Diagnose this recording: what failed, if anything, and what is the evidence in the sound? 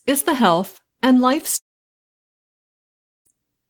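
The network stage failed, likely through a long network dropout. The speech stops at 1.57 s, and a brief buzzy continuation of the last sound fades into about 1.6 s of silence. Speech resumes at 3.28 s with the missing stretch gone. A spectrogram shows a smeared tail, then an empty gap.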